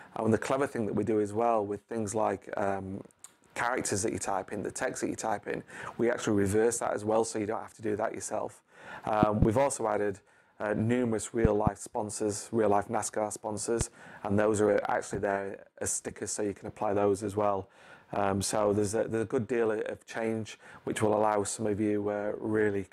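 Loud pops, doubled at 9.23–9.45 s and 11.45–11.69 s and single at 13.81–13.83 s, rise about 25, 20 and 15 dB above the audio. Each is a voltage pulse added to the signal, likely from a plug, switch, static or driver glitch. Unlike a dropout, the sound continues underneath.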